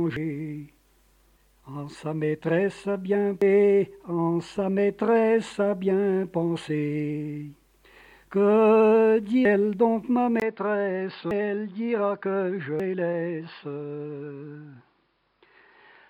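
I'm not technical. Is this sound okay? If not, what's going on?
No. Two things go wrong.

First, damaged data in a compressed stream: a few small pieces of the stored audio are corrupted, so the player can't decode them, loses its place and skips ahead to the next readable chunk. Each one is heard as a brief chirp or blip, at 0.16, 3.42, 9.45, 11.31 and 12.80 seconds.

Second, the input likely switched to a poorer device at 10.4 seconds, meaning the recording moved over to a lower-quality microphone or headset. After a very short gap, about 20 milliseconds, the sound becomes duller and more muffled, because nothing above about 5.2 kHz gets through. It also turns slightly quieter and picks up a faint new background noise, and it stays like that until the end.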